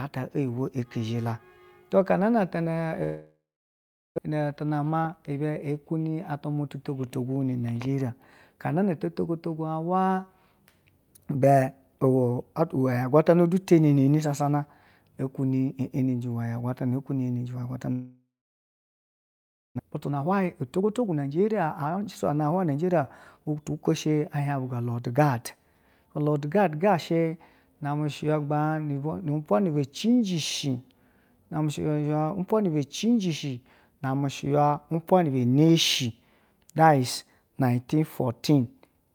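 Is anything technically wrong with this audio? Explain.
Yes, the speech has two gaps, each followed by a stretch that runs hurried.

From 3.03 to 4.20 s and again from 17.92 to 19.81 s, the sound smears into a fading buzz and then goes quiet, for 0.73 s the first time and 1.46 s the second, before speech returns with about a second of it missing. This is likely a long network dropout: nothing arrived, the receiver stretched the last sound to cover the gap, then gave up.

Right after each gap, from 4.27 to 5.40 s and from 19.82 to 23.70 s, the speech sounds rushed but keeps its normal pitch. It runs at 110% speed the first time and 121% the second. This is jitter buffer speed-up. The delayed audio arrived in a burst, and the receiver trimmed out many tiny pitch-period slices to catch up. It removed about a tenth of a second in the first stretch and roughly 0.7 s in the second.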